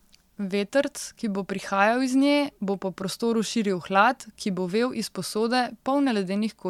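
No technical faults occur at any point in the recording.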